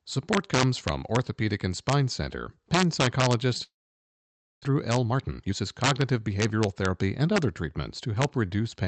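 Integer overflow runs through the whole speech clip. The signal was driven about 6 dB past the integer limit. Instead of being held at full scale, each peak over the limit wrapped around to the opposite sign. Only a small fraction of samples are affected, all on the loudest moments. Each one jumps across the full range. These are heard as harsh, violent cracks on loud syllables, far sharper than ordinary clipping.

A long network dropout runs from 3.63 s to 4.66 s. The sound breaks off, and a buzzy continuation of the last sound fills the gap and fades. Most of that second, about 0.92 s, ends up as silence or a faint steady noise. When the audio returns, about 0.6 s of it is simply gone. The likely cause is a long stretch in which no packets reached the receiver, so it concealed the gap and then resumed further on.

A jitter buffer speed-up follows from 4.69 s to 7.29 s. The dropout left the receiver holding roughly 0.4 s more delay than it wants. 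To catch up, it repeatedly cut out short pitch-period pieces. The speech plays at about 115% speed with unchanged pitch. It sounds rushed until the extra delay is worked off. The audio band stops near 8 kHz, which fits an Opus call codec at around 40 kbps.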